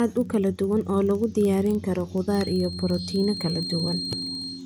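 Throughout the speech runs a faint, regular ticking that blurs into a buzz near 23.4 Hz, louder when the speech is louder. This is a filter restarted on every block: it drops its state and begins each block, which fits a 2048-sample buffer, from silence.

From 2.26 s, just after "oo lagu diyaarin karo", a thin, steady whistle at 4.2 kHz sits about 10 dB below the speech, swelling and fading slowly, until the end. This is a feedback whistle, likely from a loudspeaker-to-microphone loop poised right at the edge of feedback.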